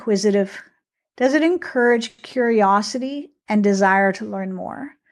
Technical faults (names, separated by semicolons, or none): short stall from a late packet